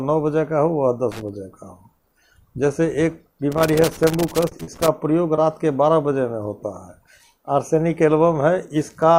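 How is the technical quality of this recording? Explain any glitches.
The recording has two kinds of glitch: bursts of loose connector crackle and three brief dropouts from short concealed packet loss.

Loose connector crackle occurs from 1.12 to 1.29 s and again from 3.52 to 4.88 s. A worn contact rapidly makes and breaks, chopping the signal into irregular bursts of crackle or scratching rather than smooth smears.

Short concealed packet loss occurs at 4.49 to 4.53 s (about 20 ms missing), 4.63 to 4.69 s (about 40 ms) and 5.35 to 5.39 s (about 20 ms). The decoder bridged each gap by extending the preceding sound, giving a brief smear or wobble instead of crackle.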